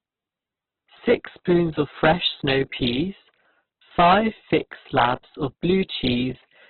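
The speech was likely squeezed through Opus compression at a very low bitrate, around 8 kbps, leaving it narrowband, grainy and rough, with nothing above 4.4 kHz.

From 0.98 to 1.60 s, hard clipping flattens peaks pushed about 4 dB past the limit, adding crackle; from 3.99 to 5.14 s, about 12 dB overload turns every loud sound into a harsh fuzz.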